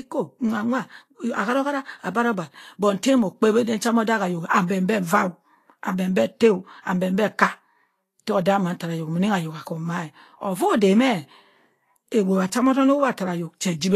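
Vorbis compression runs through the whole speech clip, likely the cause of its hissy, grainy treble and roughened tones. Nothing survives above 14.2 kHz. The coarse quantisation of the upper residue, which fits a bitrate near 35 kbps, turns fine detail into plainly audible noise.

Pre-echo appears from 6.81 to 6.86 s, a smear of about 53 ms. A sharp attack sits late in a transform block, so quantisation noise meant for the loud part leaks into the quiet moment before it. This adds a brief hiss ahead of a softened onset.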